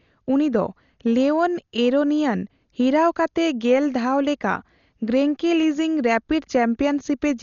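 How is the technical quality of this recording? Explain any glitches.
Poor: the speech is heavily degraded throughout. It sounds dull, with nothing above 6.9 kHz and a rough, fluttering noise around tones. The likely cause is Dolby Digital compression at a starved bitrate; the damage fits around 40 kbps. The encoder narrows the band and drops detail from many frequency lines, which are refilled with dither noise. A spectrogram would show a hard ceiling at 6.9 kHz and speckled noise around harmonics.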